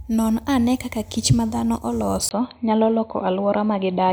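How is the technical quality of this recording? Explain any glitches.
The recording has one clear fault. At 2.29 s the sound drops out for 20 ms and then turns dull and boxy to the end, with faint new background noise and no real level change. This is likely an input switched to a poorer device, whose narrower band cuts the highs.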